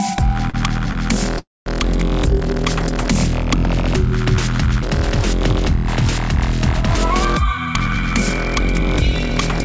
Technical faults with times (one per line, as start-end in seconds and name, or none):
0.50-0.96 short stall from a late packet
1.38-1.68 call audio freeze
6.96-9.61 jitter buffer speed-up